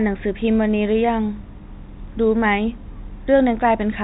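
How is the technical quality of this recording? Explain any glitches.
Nothing in this speech recording stood out as a glitch on listening, and the narrow telephone-band sound that tops out around 3.8 kHz is simply how G.711 telephone coding carries audio.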